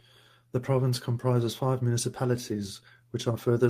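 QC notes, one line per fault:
No faults heard anywhere in the speech.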